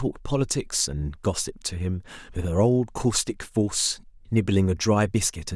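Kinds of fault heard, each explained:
No fault can be heard: there are no breaks, level jumps or added noise at any point.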